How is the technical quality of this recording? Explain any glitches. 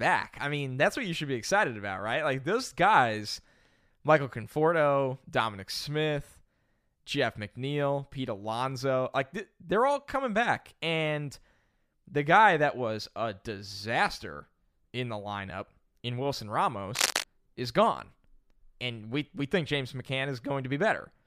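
One glitch, cable scratch noise, occurs from 16.95 to 17.24 s. A worn cable or connector was likely shifted, making its contact resistance fluctuate rapidly. That injects ragged bursts of noise roughly as loud as the speech, heard as a brief scratchy rustle.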